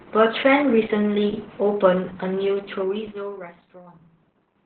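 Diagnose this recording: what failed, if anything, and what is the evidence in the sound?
The codec stage is the culprit here: Opus voice compression, and it's working hard. The speech is band-limited for the whole clip, with nothing above about 4.3 kHz, so it sounds muffled and phone-like. On top of that there's heavy coding damage: a hoarse, slightly robotic edge from the coarsely coded excitation. That narrowband, SILK-only sound points to a very low bitrate, around 8 kbps, where Opus trims the band and squeezes the detail.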